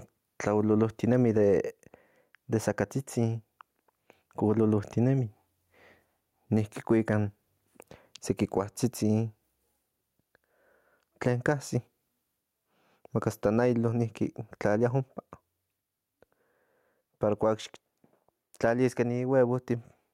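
Gain pumping runs through the whole speech clip. The level swing is around 10 dB. Loud and quiet passages sit unnaturally close together, so the sound feels squashed. The likely cause is input gain set far too high for the microphone. A fast limiter or compressor then clamps down on every peak and releases in the gaps.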